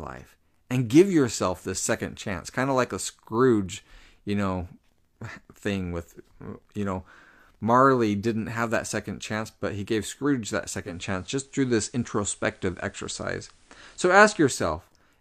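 At 10.77 s the speech goes through a digital radio blending to analogue: the receiver loses the digital stream and cross-fades over about 246 ms to the station's FM broadcast, returning at 14.66 s. During that stretch the level shifts by about 2 dB, and a faint hiss sits roughly 40 dB below the signal until the blend back removes it.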